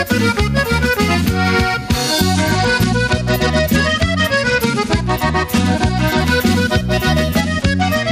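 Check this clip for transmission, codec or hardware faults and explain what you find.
Two faults are audible: gain pumping throughout, and two Bluetooth SBC bit pool drops.

Gain pumping runs across the whole clip. The likely cause is input gain set far too high, with a fast limiter or compressor reining it back whenever a loud sound arrives. The gain swings by roughly 10 dB. Loud and soft passages sit unnaturally close in level, leaving the audio squashed and breathing.

Bluetooth SBC bit pool drops occur from 2.34 s to 6.2 s and again from 7.41 s to the end at 8.12 s. When the wireless link gets congested, the sender cuts the bits given to each frame to keep the stream alive. The highest sub-bands lose most or all of their share, and the remaining bands are quantised coarsely. In both spans the treble goes dull and a gritty grain rises. The degree of loss fits a bit pool falling from 31 to 14, around 99 kbps.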